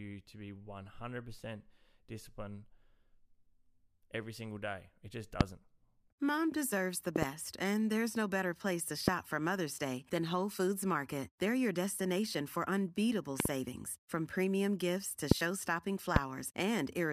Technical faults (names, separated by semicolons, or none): loud pop